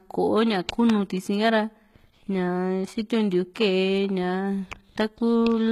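Throughout the speech, the treble sounds synthetic and gritty. S sounds come out lispy and metallic. Nothing is heard above 14.9 kHz. This points to HE-AAC compression, likely at a low bitrate near 20 kbps. Upper bands are rebuilt from copied lower ones, so harmonics misalign.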